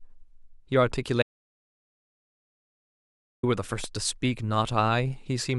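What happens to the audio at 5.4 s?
Nothing goes wrong at 5.4 s; the audio is intact at that moment.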